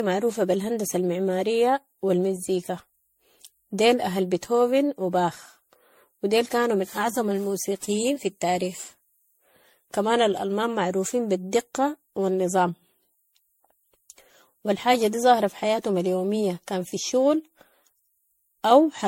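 Across the whole speech recording the sound is swirly, hollow and smeared, with blurred consonant attacks and nothing above 16.5 kHz. This is likely generation loss, with the audio re-encoded about ten times at what sounds like 64 kbit/s MP3, stacking quantisation noise and spectral holes.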